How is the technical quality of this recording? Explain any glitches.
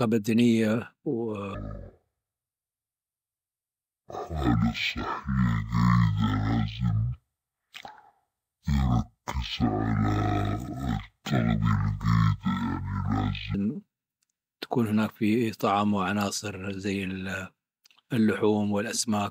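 The recording has one serious fault. From 1.54 to 13.54 s, stereo read as mono plays the speech at half speed, an octave low, because alternating left and right samples run as one channel. A faint mirrored image in the upper spectrum distinguishes it from a simple slowdown.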